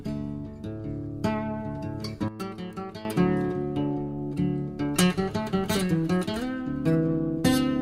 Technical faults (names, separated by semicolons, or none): sudden gain jump